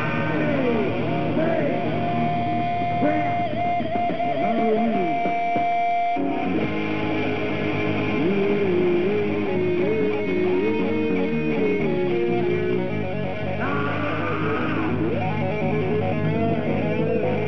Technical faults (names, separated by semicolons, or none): none